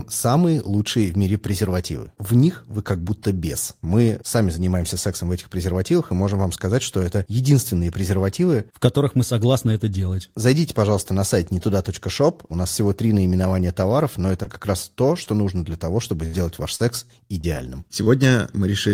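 Short concealed packet loss occurs at 14.43 to 14.48 s, after "три наименования товаров но", and again at 15.24 to 15.28 s, after "как раз то". Each time about 20 ms of speech failed to arrive in time. The receiver extended the preceding sound to cover it, leaving a brief smear or wobble before the real audio resumes.

A burst of packet loss follows at 16.26 to 16.35 s, just after "нужно для того чтобы". Roughly 80 ms went missing in a row. Concealment carries the last sound forward while fading it, so a held buzz or dying hiss bridges the gap, and the speech picks up further on with that stretch gone.

Repeated packet loss (robotic sound) spans 16.75 to 18.08 s. Short gaps recur throughout, the longest about 41 ms and about 160 ms missing in all. Each is patched by continuing the previous sound, giving a choppy texture with fragments of speech dropped out.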